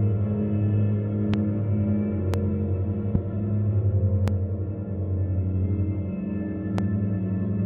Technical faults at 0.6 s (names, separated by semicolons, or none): none